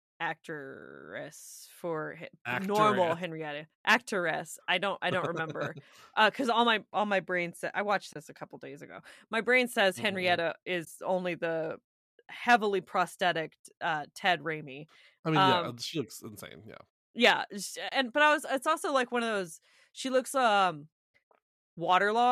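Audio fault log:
8.13–8.16 s, 10.85–10.87 s and 17.89–17.92 s: AAC frame loss with muting. Three soft gaps of about 30, 20 and 30 ms, where the decoder zeroed the missing frames and the overlapping windows faded the sound out and back in. The 10 ms steps likely point to low-delay AAC.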